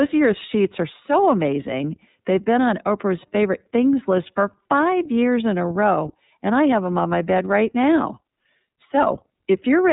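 From start to finish the speech carries iLBC codec damage, plainly audible as a rough, slightly synthetic texture. Each frame's excitation is coded independently, which fits 30 ms frames at about 13.3 kbps, and the band stops near 3.8 kHz, leaving the speech dull and narrow.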